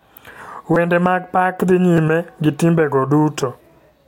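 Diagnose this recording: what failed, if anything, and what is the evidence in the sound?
Repeated buffer at the driver or buffer stage: at 0.74 s, just before "mag pak dhi", a tiny 5.8 ms chunk plays three extra times, which fits a 256-sample buffer. At 1.97 s, before "gi timbe go", it repeats twice. Late audio meant stale buffers got replayed, so each repeat is a click or brief buzz, and roughly 20 ms and 10 ms of audio are lost.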